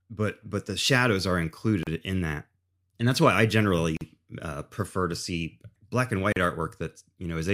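Gaps at joins of encoded pieces cut the speech at 1.83, 3.97 and 6.32 s. Unstrimmed encoder delay and padding leave 36 to 43 ms gaps with smeared edges.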